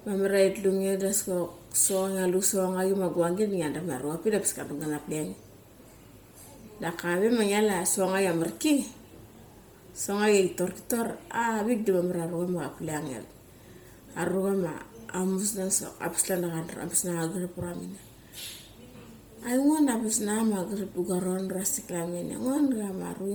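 A speech recording that has likely passed through Bluetooth LC3 compression at a low bitrate, consistent with about 32 kbps in 10 ms frames. Throughout, heavy coding leaves the upper spectrum noise-filled, giving the speech a breathy, grainy edge, though content extends to 20.2 kHz.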